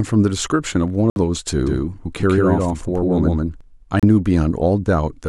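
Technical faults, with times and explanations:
1.10–1.18 s and 4.00–4.05 s, Bluetooth stall: the speech drops abruptly to silence, for 61 ms in the first gap and 33 ms in the second, then resumes. The likely cause is radio interference delaying packets until the headphones' buffer emptied and playback waited for the retransmissions. On a waveform each gap is a flat line with hard edges. On a spectrogram it is a clean vertical band with no energy at any frequency.
1.67–3.61 s, doubled audio track: a second, full-band copy of the speech runs roughly 150 ms behind the original at about the same level, so every syllable gets a distinct slap-back echo with no reverberant tail or room colouring. It most likely comes from the same signal being picked up again through a slower path. It switches on and off abruptly at the range edges. On a spectrogram each onset and formant pattern is repeated a fixed distance to the right. 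The waveform shows overlapping, shifted envelopes.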